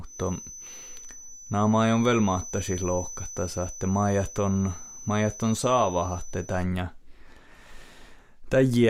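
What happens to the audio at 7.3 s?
Nothing goes wrong at 7.3 s; the speech there plays through intact, with no dropout, glitch or distortion.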